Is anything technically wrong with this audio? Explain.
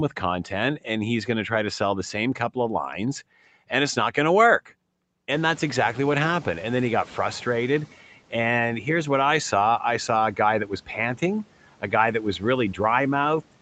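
Yes. There is a noise suppressor catching up, from 5.31 to 7.96 s, just after "not going to work". The room noise jumps by about 24 dB around 5.5 s. The suppressor's noise estimate lags behind, so the noise comes through with less reduction at first. It then sinks by about 10 dB over roughly 2.65 s as the estimate adapts. The missing content above 8 kHz points to a wideband call codec.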